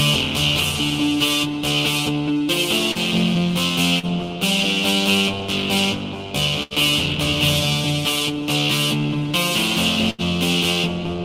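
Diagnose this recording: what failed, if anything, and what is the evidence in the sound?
Network stage, short concealed packet loss: at 2.91 and 3.99 s, about 40 ms of audio failed to arrive, and the receiver extrapolated the last sound over 35 to 40 ms and then blended back in, leaving a brief smear or wobble where the sound briefly skips.

Network stage, burst of packet loss: at 6.63 and 10.10 s, longer runs of packets were lost or late. The receiver stretched the preceding sound for about 75 to 80 ms, fading it as either a held buzz or a decaying hiss, then resumed 80 ms further on.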